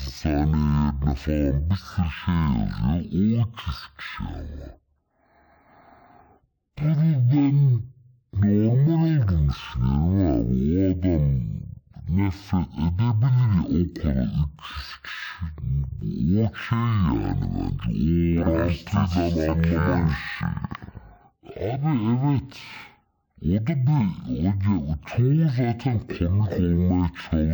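From start to finish it's stereo read as mono: interleaved left and right samples play back as one channel, so the speech runs at half speed, a full octave low.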